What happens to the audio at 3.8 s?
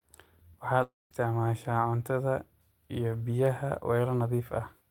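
At 3.8 s the speech carries on cleanly, with no dropout, click, distortion or other fault.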